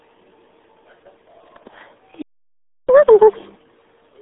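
From the first moment the speech sounds muffled, gargly and boxed in, with a watery smear on every syllable and no brightness above about 3.8 kHz. This is the RealAudio 14.4 codec. It squeezes speech into a very small data budget, consistent with an 8 kbit/s stream, by keeping only a narrow telephone-like band of roughly 300 Hz to 3.6 kHz and modelling the rest coarsely. The heavy damage that results stays on the sound for the whole clip.

At 2.22 s the speech cuts off in mid-flow and there is dead silence until 2.89 s, a gap of about 0.67 s. It then resumes where it stopped. This is a playback stall: output halted because the player most likely ran short of data or its audio thread was blocked, and nothing was sent out until it recovered.

From 2.89 s to 3.56 s the speech rushes along at double speed and sounds chipmunk-like, raised by about ten semitones. This is catch-up at higher speed. 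Having fallen behind during the stall, the player resamples its backlog to run through it twice as fast, which lifts the pitch along with the tempo. Once the lost time is recovered, speed and pitch drop back to normal.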